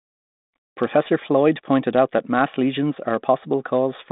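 Listening through this speech recording, carried over a 32 kbit/s G.726 telephone-band path, nothing stood out as a technical problem.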